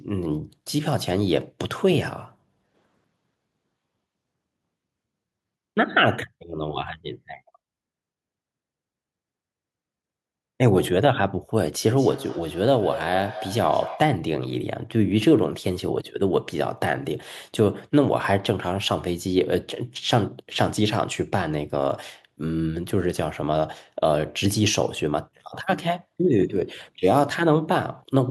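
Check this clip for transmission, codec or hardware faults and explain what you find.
One fault stands out, from 11.9 to 14.19 s: feedback echo between two devices. A second device in the same room replays this microphone's signal, which the microphone picks up again beyond its own echo canceller's reach. The speech returns as a thinner, ringing copy about a fifth of a second later, peaking about 13 dB below the speech. Room reverberation smears into a continuous tail, but these repeats are distinct and evenly spaced.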